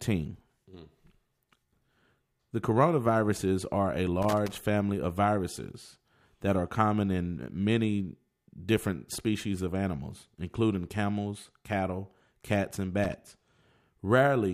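A worn or dirty connector contact in this speech clip makes and breaks as it shifts, giving loose connector crackle: irregular scratchy bursts from 4.22 to 4.60 s and again from 13.03 to 13.14 s.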